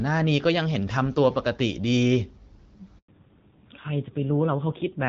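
A handover gap runs from 2.98 to 3.08 s, a 100 ms hole in the speech. While the phone switched the call from one network to the next, no speech frames came through, so the voice fades out within a few tens of milliseconds and stays silent until the new link picks up. Whatever was said in that tenth of a second is gone, not muffled or garbled.

A fallback to narrowband follows at 3.08 s and lasts to the end of the clip. Before this point the speech carries the fuller, clearer sound of the AMR wideband (HD Voice) codec, consistent with a rate around 12.65 kbit/s and showing only light coding damage. After the handover the call lands on an older narrowband codec, which points to AMR-NB at roughly 7.4 kbit/s. Nothing above 4 kHz survives, so the voice turns duller and rougher for the rest of the audio.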